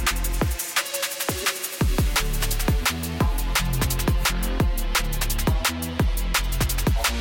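At about 1.37 s there's a short squeaky burst, lasting until roughly 1.45 s, and that's a corrupt frame decoded. Some bits in the compressed stream got flipped, and the decoder went ahead and played the damaged data instead of concealing it. Misread gains and codes scatter energy into frequencies that shouldn't be there. It spans what sounds like a few consecutive frames and peaks at around -15 dBFS, coming through as a brief chirpy blip.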